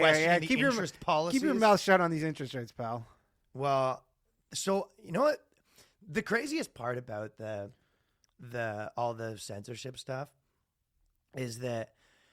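No technical faults are audible.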